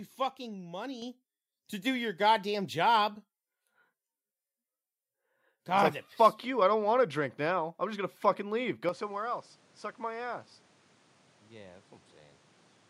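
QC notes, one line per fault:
1.02 s, microphone volume stepped up: the speech and the background noise jump louder together in a single step, by about 7 dB, and stay at the new level. Because everything rises at once rather than the speech alone, the jump comes from the gain ahead of any processing. The call software judged the microphone too quiet and raised the device's input volume in one move instead of easing it up.
8.89 s to 12.89 s, input switched to a poorer device: with no gap at the join, the speech turns duller and drops roughly 5 dB. A new noise floor appears around 30 dB below the speech. A sudden narrower band, a different level and a different background at one instant likely mean the recording input changed mid-clip to another microphone or a headset's call profile.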